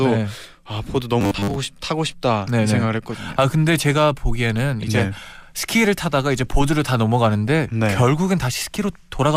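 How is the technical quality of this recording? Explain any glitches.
One glitch, from 1.21 to 1.56 s: robotic sound from repeated short buffers. A rigid metallic 100 Hz buzz replaces most of the speech, likely from a 10 ms buffer being replayed while new audio was missing.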